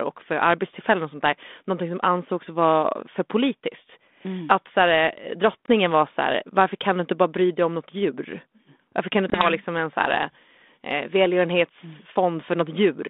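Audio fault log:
5.66–5.68 s and 9.30–9.47 s, packet loss on an ADPCM call: a 20 ms packet drops to silence, then the decoder's predictor and step size mismatch, so speech returns slightly distorted before settling.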